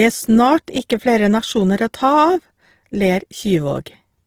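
All the way through, the speech sounds grainy and rough, likely Opus compression in CELT mode padding starved bands with noise, which fits about 16 kbps.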